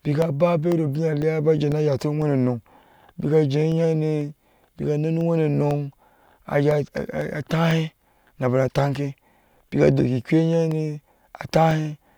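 From 0.22 s to 11.71 s, the speech carries periodic USB or driver dropouts. Every 0.5 s, something blocks the audio path briefly. About a millisecond is lost and filled with silence. Around twenty small, evenly spaced ticks result, audible only under signal.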